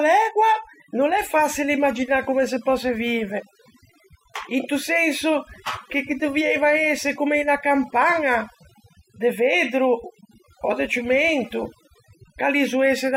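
Overdone noise removal runs through the whole of this speech clip. A noise reduction stage has been pushed far too hard, so any frequency band that sits close to its idea of the noise floor gets pulled way down or shut off entirely, and the softer parts of the voice get caught up with it. You hear it in the gaps as near-dead silence with little twinkly specks.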